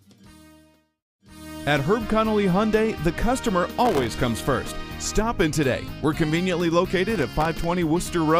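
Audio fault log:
3.85 to 4.10 s and 7.10 to 7.64 s, processor overload crackle: the processor repeatedly misses its deadlines for very short audio buffers, which points to buffers of around a millisecond and a half. Each miss drops a sliver of silence with hard edges. Some twenty to thirty of these in quick succession produce a gritty, tearing crackle that stops once the load eases.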